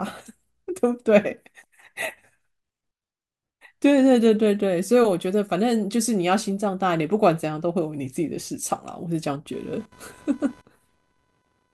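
A speech recording with computer activity noise from 9.53 s to the end at 11.73 s: a buzzing pulse train at around 500 Hz, roughly 30 dB below the speech, as processor or graphics load shifts the shared audio ground. On a spectrogram it shows as evenly spaced horizontal lines; on the waveform, as a fine buzz filling the pauses.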